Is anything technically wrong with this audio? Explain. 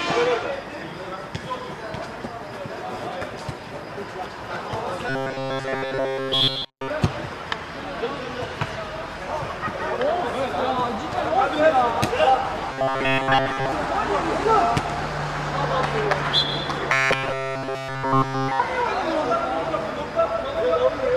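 Yes. At 5.09–6.90 s, 12.73–13.72 s and 16.93–18.60 s there's robotic sound from repeated short buffers: a rigid metallic buzz at 134 Hz. It's likely one 7.5 ms chunk looping while new audio is skipped, throughout the first and last stretches and for most of the middle one.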